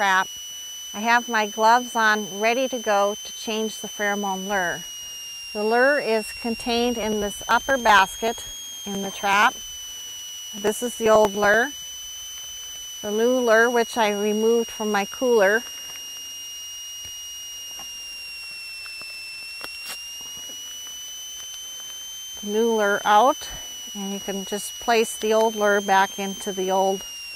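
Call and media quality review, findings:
Switching supply whistle, whole clip. High tone wandering between 2.68 and 3.28 kHz, roughly 15 dB under the signal. Power supply running in audible burst mode or beating with another supply.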